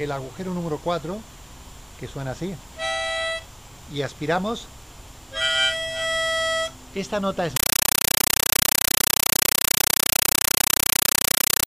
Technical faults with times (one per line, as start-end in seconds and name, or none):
7.56-11.66 compressed stream played as audio